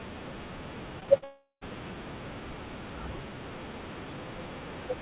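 Speech, carried over a narrowband call path whose bandwidth stops at 4 kHz, consistent with G.711 mu-law. Short concealed packet loss occurs in a tight cluster at 1.00 to 1.03 s, 1.03 to 1.10 s and 1.18 to 1.24 s, with gaps of about 20 to 40 ms each. In each gap the receiver extrapolated the preceding sound for roughly 14 to 44 ms and then crossfaded back into the real signal. The result is brief smears and wobbles, and short consonant detail in those spots can drop out. Immediately after, a long network dropout runs from 1.24 to 1.63 s. No audio arrived for about 380 ms, likely due to a network interruption. The decoder filled the hole by continuing the last sound as a fading buzz or hiss for much of that span, leaving roughly 110 ms of near silence before the signal resumes with the missing section skipped.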